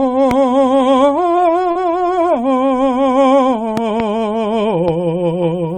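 At 0.31 to 0.33 s a loud pop jumps out of the music, peaking around 10 dB above it while the music carries on underneath. It is likely a voltage step or pulse from a plug, switch, static discharge or driver glitch entering the signal. On a waveform it shows as a single tall spike standing clear of the surrounding envelope. On a spectrogram it is a thin vertical stripe of energy running across the whole frequency range.

From 1.71 to 1.77 s there is a short concealed packet loss. About 40 ms of audio never arrived in time, and the receiver filled the hole by extending the preceding sound before blending back into the real signal. It is heard as a brief smear or wobble in the music. On a spectrogram the harmonics flatten into a short, overly steady patch instead of evolving, with a soft seam where the real audio resumes. The waveform shows a short stretch of repeated-looking cycles.

Between 3.77 and 4.02 s a double pop occurs. 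Two sharp clicks arrive in quick succession, again around 10 dB above the music, likely from a switching transient or electrical glitch. They appear as two separated spikes on the waveform and as two full-band vertical lines on the spectrogram.

At 4.88 to 4.90 s a final, weaker pop peaks about 5 dB above the music. It is likely from the same kind of transient. It shows as a smaller isolated spike and a fainter vertical stripe.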